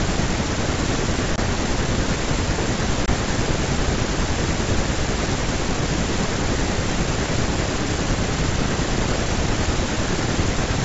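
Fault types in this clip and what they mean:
Packet loss on an ADPCM call: two hard-edged 20 ms silences, each then followed by briefly disturbed speech while the decoder's predictor and step size resynchronise, unlike a clean dropout.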